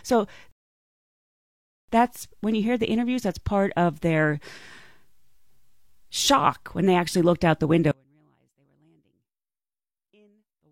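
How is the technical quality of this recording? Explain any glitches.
The speech recording has two clear technical faults: an early playback stall and a dropout that runs to the end.

From 0.51 s to 1.89 s there is a rebuffering stall. The player ran short of downloaded data and halted, adding about 1.37 s of silence. Playback then resumes exactly where it stopped, with "that's when you hear", so no content is lost.

At 7.91 s, right after "actually looked out the", an audio dropout to a faint residue begins and lasts to the end. The likely cause is loss of the wanted signal while the downstream path stayed live. Only a faint trace remains, roughly 40 dB below normal level, and the cut is abrupt rather than faded.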